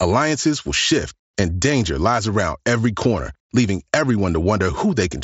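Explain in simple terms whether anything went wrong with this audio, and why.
Nothing went wrong: the speech comes over an ordinary Bluetooth mSBC headset link, which by design carries nothing above about 7.7 kHz, so the slightly dulled top end is just how that connection normally sounds.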